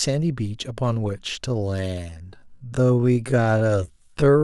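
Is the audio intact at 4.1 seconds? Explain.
No. At 4.1 seconds the speech is inside a time-stretched section that runs from 1.44 s to the end of the clip. From 1.44 s the pace abruptly drops to about 0.54 times normal speed while the pitch stays the same. This is likely a pitch-preserving stretch that fills the extra length by repeating short fragments of the waveform. The slowed speech drags.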